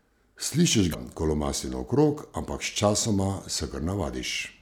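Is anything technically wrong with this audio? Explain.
Yes, there's one fault. From about 0.90 to 0.95 s, just before "ko lomasti naokrog ampak", there's a short burst of damaged data in a compressed stream. A stretch of the encoded bytes got corrupted, so the decoder misread those frames, lost its place, and had to hunt for the next valid frame header before it could carry on. What you hear is a brief disruption of about 44 ms that breaks into the speech right there.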